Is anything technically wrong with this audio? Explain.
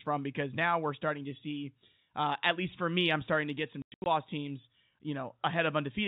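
Yes. Right after "starting to get some", from about 3.82 to 4.06 s, there's packet loss filled with silence: packets went missing and got replaced by dead air, about 200 ms in all across 240 ms, with the longest gap 100 ms. That fits roughly 20 ms packets, and the holes have hard edges.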